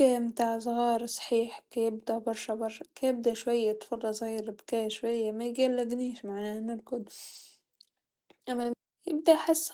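Five short spots in this speech have a lost packet rebuilt from error correction: 3.27 to 3.33 s, right after "صحيح كيبدا برشا برشا"; 5.07 to 5.13 s; 6.03 to 6.09 s, just before "معناه نرقد"; 7.31 to 7.41 s, after "معناه نرقد"; and 8.51 to 8.69 s. No gaps, since the decoder played low-bitrate backup copies carried in the next packets, but those 40, 60 and 100 ms patches sound grainier and noisier.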